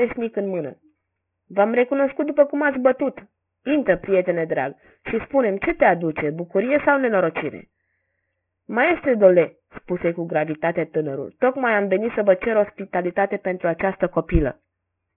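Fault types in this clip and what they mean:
Aliasing: the speech was taken down to a much lower sample rate with no filtering first, so everything above the 3 kHz fold point mirrors back as false tones. Sibilants come out gritty and metallic, with the folded energy sitting roughly 15 dB below the speech level.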